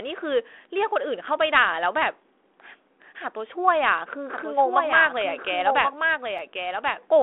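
From 4.34 s to the end, a doubled audio track appears, most likely because the speech was captured a second time by a slower path. A full-band copy about 5 dB quieter trails roughly a second behind, starting abruptly, dry and without room colour, so overlapping speech runs over itself.

At 6.38 s a block of digital silence occurs, most likely because the output buffer was not filled in time, and the audio went silent for 2.67 ms, which fits a 128-sample buffer. The abrupt cut and return produce a tick or dip within the narrow telephone band of the G.726 line.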